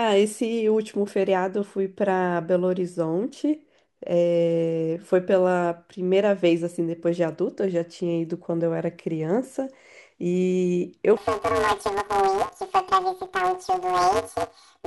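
Speech, and from 11.17 s to the end at 14.87 s the sound turns into a robotic buzz at about 188 Hz, with no clear octave shift. This is planar audio read as interleaved: each block of all left then all right samples is read as alternating pairs. The 5.33 ms block period fits a 256-sample block.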